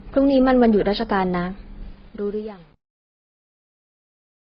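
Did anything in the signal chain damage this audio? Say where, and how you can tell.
Yes. At the codec stage, the audio has no content above 5.6 kHz throughout, and two different kinds of coding artefact sit on top of each other rather than one consistent texture. That points to transcoding between lossy codecs, likely a low-rate AAC-LC encode later re-encoded as Opus, with each codec adding its own damage.

At the sample-format or gain stage, truncation distortion on a fade runs from 1.82 s to 4.54 s, harshest from 2.07 s to the end. The fade-out's quiet tail turns gritty, which fits an undithered 8-bit stage. Unlike the codec damage, it worsens as the level drops.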